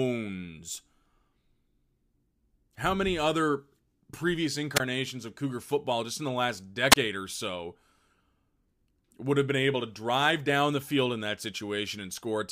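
Speech twice drops into brief near-silent holes, a burst of hiss giving way to about 19 ms of mute after "many other previous" (4.75 to 4.80 s), then about 25 ms between "just in the last" and "or so" (6.90 to 6.96 s). These are wireless microphone squelch dropouts: the analogue FM radio link fades and the receiver's squelch briefly mutes the output.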